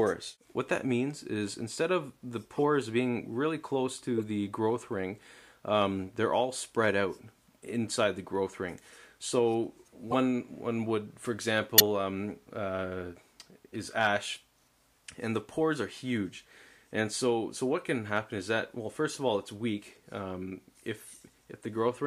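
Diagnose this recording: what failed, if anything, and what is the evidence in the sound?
Codec stage: corrupt frames decoded anyway, so flipped bits throw energy into the wrong frequencies. You hear a few frames of chirpy noise bursts at 2.51–2.59, 4.18–4.20, 10.11–10.14, 11.78–11.81, 13.67–13.75 and 21.74 s.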